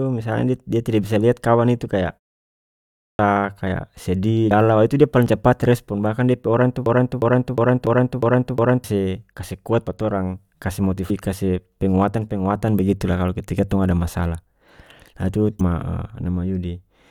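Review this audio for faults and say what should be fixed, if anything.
Clipped start after a pause at 2.95 s: after about 0.8 s of silence the output device was still waking, so the first 240 ms of the speech is missing and it begins abruptly. Keep the output stream open through pauses.

Damaged data in a compressed stream at 4.50, 7.85, 11.09 and 15.59 s: corrupted frames make the decoder lose sync and jump to the next header, leaving short chirps or blips. Check stream integrity and filter metadata out of the audio data.

Broken-record loop from 6.86 to 8.84 s: a 358 ms fragment repeats seven times back to back, with the audio for that stretch lost, most likely because the stream stalled and the last buffer kept being replayed. Detect stalls and output silence instead of resending the held buffer.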